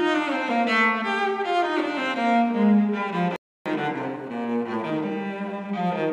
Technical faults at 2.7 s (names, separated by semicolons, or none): none